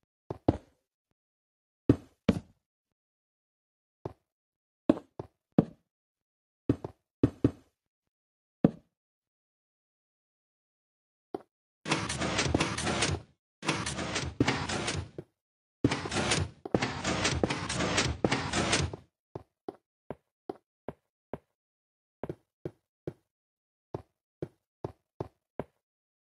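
Nothing in the audio points to a technical fault at any moment in the clip.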